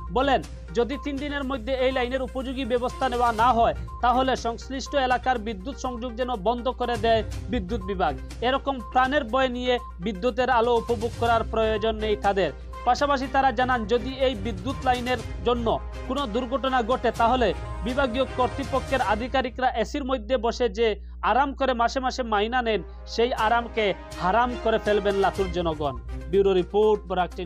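From the very start and all the way through, there's mains hum sitting under the sound: a steady low tone at 60 Hz, with a few low harmonics stacked above it. It's fairly prominent, somewhere around 15 dB below the main signal, so you'll hear it clearly in any quiet stretch. That's the power line leaking into the signal path, the classic result of a ground loop or a transformer sitting too close to the gear.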